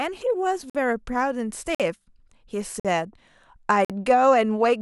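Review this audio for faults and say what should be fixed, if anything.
There's a gap between chunks fault in this speech: hard-edged 50 ms holes at 0.70–0.75, 1.75–1.80, 2.80–2.85 and 3.85–3.90 s. Each 1 s chunk ends with a short stretch of silence before the next one starts, so the sound stutters at every join. Make sure each chunk is stitched or played back exactly where the previous one ends, with no padding between them.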